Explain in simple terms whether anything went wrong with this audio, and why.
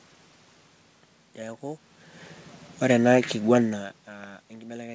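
Nothing went wrong here: the background noise is just the room, the changes in loudness around 2 and 3.5 seconds come from the talker moving relative to the microphone, and the missing top end above about 8 kHz is the normal effect of the G.722 call codec.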